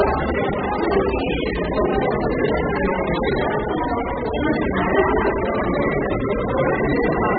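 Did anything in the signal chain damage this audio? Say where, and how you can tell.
Yes: AAC compression throughout, at the codec stage. Nothing survives above 4.7 kHz, and the dull, smeared, fizzy texture likely comes from starving the quantiser at a very low bitrate, around 8 kbps.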